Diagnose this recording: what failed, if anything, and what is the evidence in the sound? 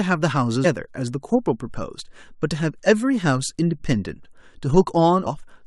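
At the codec stage, damaged data in the compressed stream left a frame the decoder could not read correctly. It lost sync and searched for the next valid frame header, which produces the short glitch in the speech at 0.64 s.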